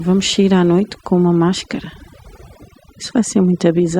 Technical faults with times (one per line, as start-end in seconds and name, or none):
0.00-4.00 overdone noise removal